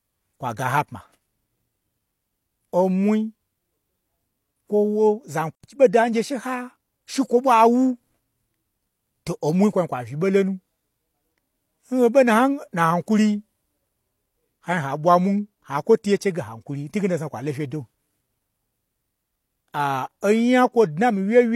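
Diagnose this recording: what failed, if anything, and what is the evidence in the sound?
The codec stage is at fault here: there's pre-echo at 5.62 s and 20.21 s, a brief hiss smearing in ahead of sharp speech attacks, spanning about 19 ms and 14 ms. The transform block spreads quantisation noise meant for the loud onset back into the quiet moment before it.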